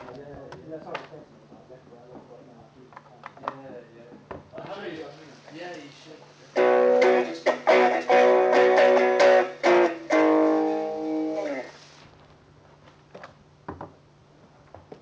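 No technical faults can be heard; the audio has the character of a call path, with nothing above 8 kHz, which fits a wideband codec such as G.722.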